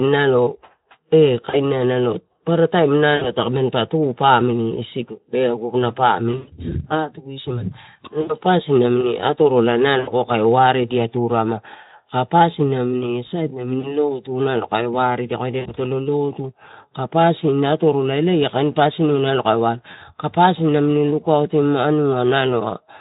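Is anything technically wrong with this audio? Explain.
Yes. There is VoIP packet loss concealed by the speech codec at 1.49–1.59, 3.15–3.32, 6.31–6.50 (just after "pamili isigu aguna"), 8.21–8.36, 9.99–10.11, 13.79–13.96, 15.59–15.68 and 19.91–19.96 s.

Packets carrying 20 to 120 ms of audio were lost. The Speex decoder, which is running at a moderate bitrate and adds only light coloration of its own, filled each gap by extending its last pitch and spectral shape while lowering the level. Each dropout therefore becomes a short buzzy or hoarse smear that fades, and the speech stays thin for a moment after packets resume. At 6.31 s the losses are scattered over about 160 ms, with the longest unbroken stretch lasting 100 ms.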